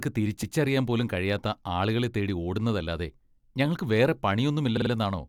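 Repeated frames at 0.42 s: a 139 ms chunk plays twice right before "പോലും കഴിയാത്ത ആളുകളെ തേടി". Then at 4.76 s, a 46 ms block loops three extra times, giving a stutter.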